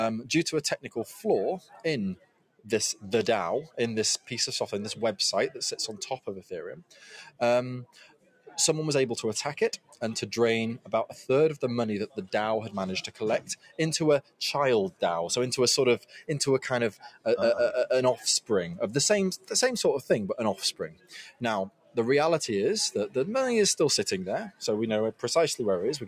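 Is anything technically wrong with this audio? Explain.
Yes. A noise suppressor applied to music or sounds runs through the whole clip. A suppressor tuned for speech is treating steady tones, ambience and reverb as noise, so its gain keeps moving by roughly 10 dB as it decides what to keep. Attacks pass while sustained material and decays are pulled down, which gives the sound a pumping, unsteady level and a thinner body than the source would have.

Sound cut by the noise suppressor shows up in seven spans: 0.82–4.28 s, 6.19–8.57 s, 9.77–15.02 s, 15.99–17.26 s, 18.41–19.51 s, 20.72–21.97 s and 24.5–25.23 s. In each span the suppressor judged the material to be noise and dipped it as far as about 18 dB, or about 17 dB at 18.41 s and 24.5 s. The dips are intermittent. They add up to roughly a second in the first span and to shorter stretches in the last ones. Held or fading sound sinks or has its tail clipped, while sharp onsets stay mostly intact.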